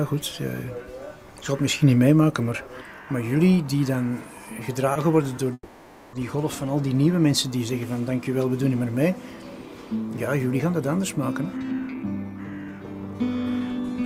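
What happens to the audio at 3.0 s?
Nothing goes wrong at 3.0 s; the audio runs on intact through that moment, with no dropout, click or other fault.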